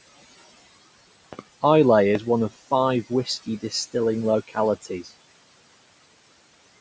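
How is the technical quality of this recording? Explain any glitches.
The recording has three kinds of glitch: noise suppressor artifacts throughout, two loud pop events, and three stretches of speech cut by the noise suppressor.

Noise suppressor artifacts run through the whole clip. A suppressor lowers the bands it judges to be steady noise, frame by frame, here by about 20 dB. The room noise, about 19 dB below the speech, is pushed down between phrases. It swells back under them.

A loud pop occurs from 1.33 to 1.41 s as two quick pops, peaking about 15 dB above the speech. A single, stronger pop follows from 2.15 to 2.17 s, about 20 dB up. A voltage step is the likely cause, probably from static, a switch or a driver glitch. The speech continues underneath.

Speech cut by the noise suppressor happens from 3.09 to 3.74 s, 4.48 to 4.57 s and 4.82 to 5.11 s. The suppressor mistook quiet parts of the speech for noise and lowered them by up to about 16, 15 and 12 dB. 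Each stretch loses roughly 100 to 150 ms, and those parts sound swallowed.

The call microphone processing works as intended, with nothing above 8 kHz.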